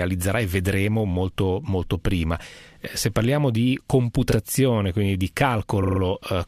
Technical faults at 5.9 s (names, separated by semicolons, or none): repeated frames